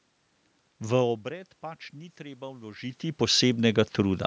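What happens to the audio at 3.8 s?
At 3.8 s the automatic gain is still rising. This fault runs from 0.81 s to 4.22 s. The input level had fallen by about 18 dB, as the talker moved away from the microphone. The automatic gain control heard the quieter signal and slowly raised its gain, by about 7 dB over the span. So the voice and the room noise swell together. By 3.8 s the gain has won back only part of the lost level.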